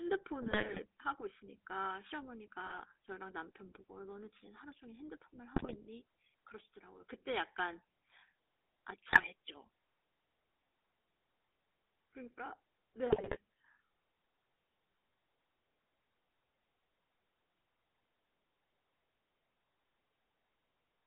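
Speech, heard through the GSM full-rate codec for its whole length. The band is narrowed to roughly 300 Hz to 3.6 kHz, like a phone line. The codec damage is plainly audible. The voice has a buzzy, gravelly roughness. That comes from the coarse pulse excitation that drives the vocal-tract filter. The sound fits a 13 kbps full-rate stream. GSM bit errors also break in at five points: 0.42 to 0.81 s, 2.66 to 2.82 s, 5.56 to 5.84 s, 9.10 to 9.27 s and 13.09 to 13.37 s. In each burst the voice squawks, pops and gargles. Corrupted filter, pitch or gain values warp the spectrum or jolt the level frame by frame. The bursts at 5.56 s and 9.10 s sound the most damaged.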